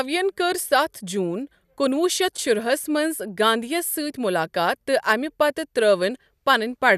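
Speech, with nothing technically wrong to be heard anywhere in it. There are no fault times or causes to report.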